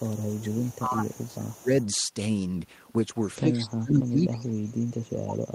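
From 0 to 0.96 s a faint echo leak trails the speech by 172 ms, about 25 dB down. The likely cause is a far-end echo canceller that left residue, which shows on a spectrogram as a weak, shifted copy of the speech harmonics.

Speech suppressed in double talk dips the level by roughly 20 dB from 0.03 to 0.18 s and from 0.41 to 1.38 s, likely because the canceller ducked both talkers. The waveform shows abrupt envelope notches.

The echo leak returns from 1.13 to 1.86 s with the same 172 ms delay.

Within it, another brief suppression runs from 1.58 to 1.71 s.

From 3.39 s to the end, suppression deepens to roughly 30 dB.

A final faint echo blip appears from 5.14 to 5.18 s, about 40 dB down.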